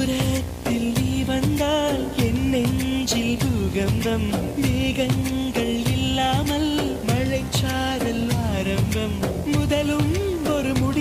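A video or display buzz runs through the whole audio: a steady 60 Hz buzz with hash above it, sitting roughly 15 dB below the programme. This points to a screen or video cable coupling its 60 Hz field-rate interference into the audio path.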